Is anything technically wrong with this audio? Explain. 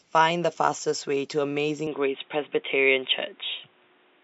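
Yes. At 1.87 s the recording likely switches its input to a poorer device, and that holds to the end. The new path passes nothing above 3.8 kHz, so the speech turns dull and boxy with no gap and roughly unchanged level, over a faint new noise floor around 40 dB down.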